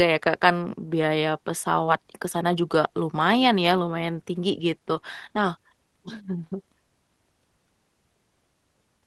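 At 1.85 to 1.89 s, between "kan biaya" and "ke sana juga lumayan", there is a short concealed packet loss. About 20 ms of speech arrived too late, and the receiver extrapolated the previous sound to cover it. Instead of a silent gap, it comes across as a brief smear before normal audio resumes.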